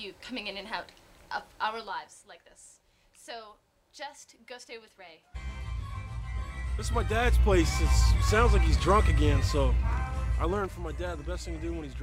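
A level change between 6.41 and 7.66 s was applied in coarse steps, around forty a second, with no smoothing, producing zipper noise: each jump in gain clicks, so a fine ticking rides on the sound as it shifts by about 10 dB.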